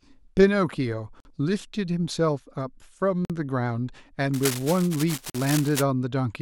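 At 1.20 s, 3.25 s and 5.30 s the speech drops out for about 48 ms each time, at the joins between 2 s chunks. This is a gap between chunks: silence is inserted at each join. The waveform shows flat, hard-edged holes, and the spectrogram shows clean vertical blank stripes.

From 4.34 to 5.83 s there is cable scratch noise, with dense, uneven crackling about 10 dB below the speech. It most likely comes from a worn contact being moved, which makes its resistance fluctuate. On a spectrogram it appears as ragged broadband speckle, and on the waveform as irregular spiky fuzz.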